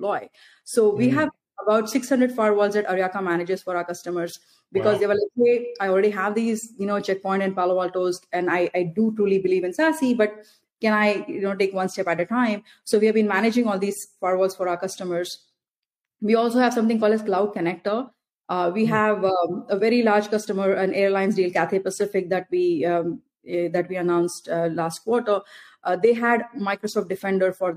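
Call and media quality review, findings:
No findings for this call and media quality review.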